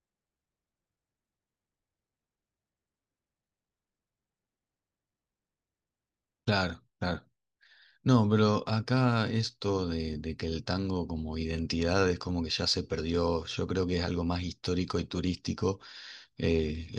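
Listening through the speech recording, nothing stood out as a technical fault at any point.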